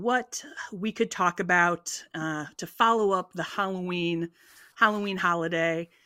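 Speech recording with no audible technical faults.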